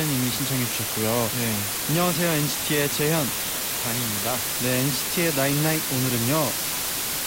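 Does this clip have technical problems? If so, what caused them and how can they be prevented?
Yes. The speech carries low bit depth with dither from start to finish. A steady, even hiss sits under everything, about as loud as the speech itself. There is no crunchy distortion, only noise. The signal has been rounded to very few levels, which fits about 3 bits. Dither was added before the rounding, so the error became uniform white noise. Prevention: record and export at 16 or 24 bits.

There is also a train of clicks from 1.53 s to 3.22 s. It is a run of around ten sharp ticks of much the same shape, at about 4.8 per second. The spacing is uneven. The ticks stand out above the speech, peaking somewhat louder than it. The likely cause is electrical interference from nearby equipment or a faulty connection or power supply. Prevention: move other devices away from the cables and interface, and use a stable interface connection.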